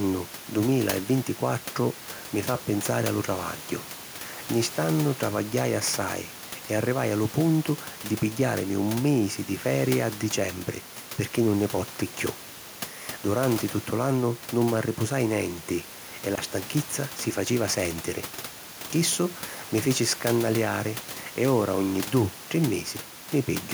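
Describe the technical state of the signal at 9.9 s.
At 9.9 s the speech signal is intact, with only the room's own background noise sitting about 17 dB below the speech.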